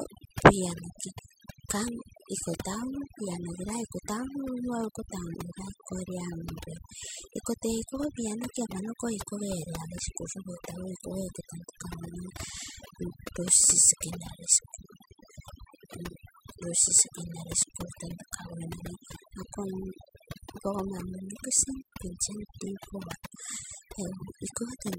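Overdone noise removal runs through the whole recording, from start to finish. A noise reduction stage was pushed far too hard, so any frequency band sitting close to its noise estimate gets pulled right down or switched off. The quieter components of the speech fall under that threshold and vanish along with the background noise. The gaps become near silence scattered with twinkling specks.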